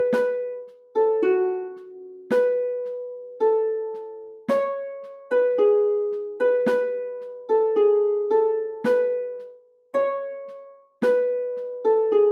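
From the start and through the whole clip, a noise suppressor built for speech is acting on non-speech sound. It reads sustained material and decaying tails as background noise and pulls them down while onsets pass largely intact. The gain moves by roughly 5 dB as it does this, so held sound pumps and thins, and tails are trimmed rather than left to fade naturally.

Sound is cut by the noise suppressor at four points, where it judges the material to be noise and attenuates it far harder than elsewhere. From 0.6 to 0.96 s the level falls by up to about 18 dB, and from 4.16 to 4.48 s by up to about 15 dB. From 9.35 to 9.94 s and again from 10.75 to 11.01 s it dips by up to about 18 dB. Each is heard as a sag, with the sustained part sinking away before the suppressor releases.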